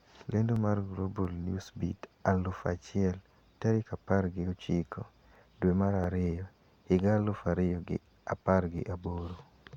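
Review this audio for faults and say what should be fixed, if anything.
A click recurs every 0.685 s through the speech, about fifteen of them between 0.56 s and 9.47 s. That steady spacing points to clock drift buffer slips, likely two clocks disagreeing by roughly 1000 ppm, so the buffer periodically drops or repeats a few tens of samples. Lock both devices to one shared clock, or resample asynchronously between them.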